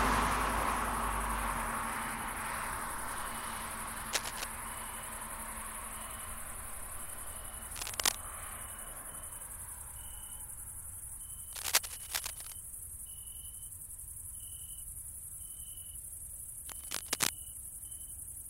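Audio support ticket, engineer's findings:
Cable scratch noise, 4.13–4.44 s, 7.76–8.18 s, 11.53–12.54 s, 16.66–17.29 s. Dense, irregular scratching bursts over the sound. First burst about level with the signal, later three roughly 5 dB above it. Likely a worn cable, connector or control being moved: rapidly fluctuating contact resistance modulates the signal path, injecting uneven noise for the duration of each movement. Longest event near 12 s, about 1 s.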